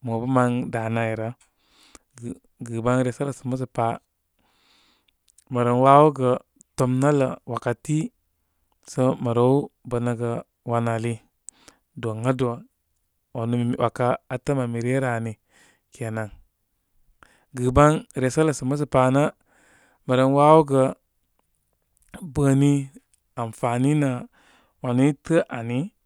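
No technical faults can be heard in this speech recording. Nothing in the audio points to a problem in how it was captured, processed or delivered.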